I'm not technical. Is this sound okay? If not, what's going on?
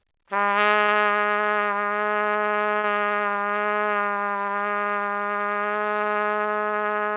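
No. There are two short bursts of packet loss, at about 0.82 to 0.90 s and 2.78 to 2.86 s. Each time, a few pieces of the call audio arrived too late or not at all. The receiver filled each hole by stretching the last bit of sound and letting it fade. Then the sound resumes a little further on, with about 60 ms skipped. Unlike a plain dropout, there is no dead silence, just a brief smeared fade and a small jump ahead. The call line itself carries nothing above 4 kHz, so the sound is dull throughout.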